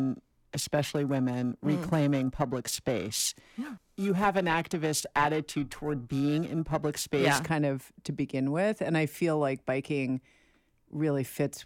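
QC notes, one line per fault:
0.00–7.44 s, periodic clock jitter: the converter's sample clock wobbles at around 1 kHz, so each component of the speech gains sidebands that far above and below it, strongest at higher frequencies, giving a rough, metallic edge that ends just before "kind of to begin".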